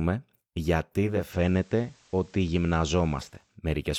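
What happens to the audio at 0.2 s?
Nothing goes wrong at 0.2 s; the speech there is intact, with no dropout, click, distortion or other fault.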